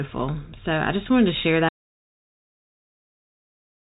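A speech clip with an audio dropout to silence: after "just wanted to share" at 1.69 s, the sound cuts to silence until the end, likely a lost input. Waveform flatlines; spectrogram goes blank.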